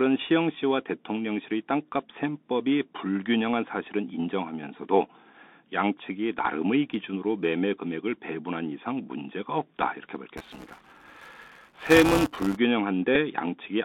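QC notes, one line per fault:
Throughout: Bluetooth CVSD headset codec. Narrow, telephone-like band of roughly 200 Hz to 3.7 kHz, a granular hiss under the speech, scratchy sibilants and distortion on loud high sounds. This is the one-bit CVSD headset codec, at a rate that fits a 64 kbps link, whose adaptive step cannot keep up with fast high-frequency changes.
10.37 to 12.58 s: buffer tearing. A robotic buzz at about 200 Hz rides on the speech and stops when the signal stops. Writer and hardware reader of the playback ring buffer have drifted into each other, so around a tenth of each period replays audio about 10 ms old, with hard joins at both edges.
13.15 s: Bluetooth headset packet repeated. A brief tick or rough blip, over in an instant. About 7.5 ms of voice data went missing, which points to two lost packets, and the headset chip decoded the previous packet's bits again in their place.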